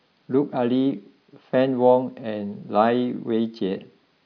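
No technical faults can be heard at any point in the speech recording.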